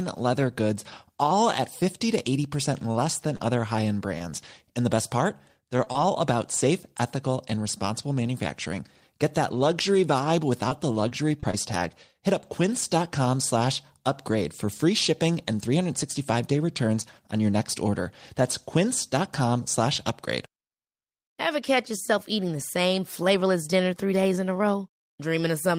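From 2.57 to 4.23 s there are scattered short gaps: roughly four small dropouts, none much over 30 ms, each one patched by stretching the sound just before it. You hear brief ticks and little smears, but the speech stays clear.

Right after "the best part", from 5.77 to 5.96 s, it turns into repeated packet loss (robotic sound). There are three holes in quick succession, about 54 ms filled in all and covering over a quarter of that short span. It goes choppy, with pieces missing, just before "about safe ethical and".

Scattered short gaps come back from 10.69 to 12.83 s, running up to "slash upgrade for free". This time there are roughly seven, about 100 ms patched in total. Again you get brief hiccups and smears.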